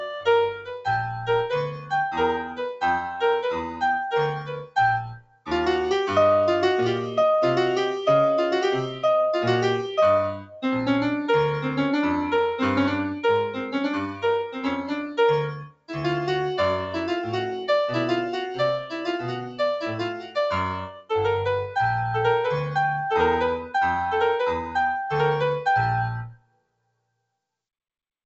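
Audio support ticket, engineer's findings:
Noise suppressor applied to music or sounds, throughout: speech-tuned suppressor left active on non-speech audio, treating sustained content and tails as noise. Level swings around 5 dB. Call path sounds consistent with G.722.

Sound cut by the noise suppressor at 0.53–5.49 s, 10.38–10.64 s, 13.6–15.91 s, 18.84–21.11 s and 26.27–27.25 s: sustained or decaying material gated down, up to about 21 dB (about 10 dB at 10.38 s).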